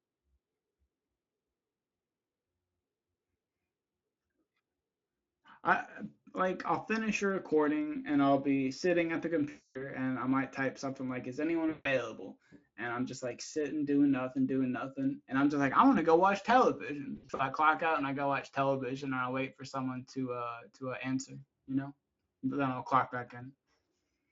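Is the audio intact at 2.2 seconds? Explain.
Yes, the speech at 2.2 seconds is intact, with no dropout, glitch or other fault at that moment.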